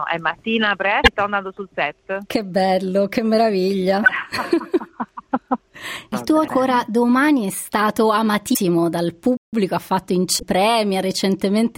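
At 1.01 to 1.08 s the first burst of damaged data in a compressed stream appears as a brief glitch. The same fault returns at 4.06 to 4.10 s, 6.44 to 6.50 s and 8.50 to 8.57 s. Each time, corrupted bytes make the decoder misread a frame and lose sync until it finds the next header. On a spectrogram each event is a brief break in the surrounding texture, and the waveform shows a small discontinuity.

From 9.37 to 9.53 s the output drops to silence for about 158 ms and then resumes. This playback stall likely comes from the player running short of data or having its thread blocked. The waveform shows a flat line of silence, and the spectrogram shows a clean blank column with hard edges on both sides.

At 10.36 to 10.43 s one more compressed-stream corruption produces the same kind of blip as the earlier ones.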